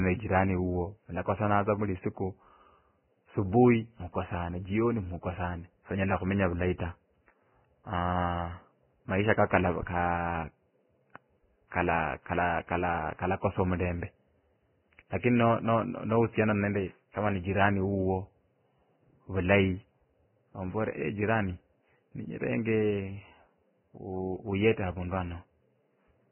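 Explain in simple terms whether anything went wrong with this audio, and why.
The speech sounds muffled and grainy from start to finish, and the likely cause is heavy Vorbis compression. At a very low quality setting, this codec throws away everything above about 3.1 kHz, which is why the speech loses its crispness and sounds like it's coming through a narrow pipe. The treble that remains is stored so roughly that fine detail turns into a hissy, gritty texture, and the starts of sounds come out smeared instead of sharp.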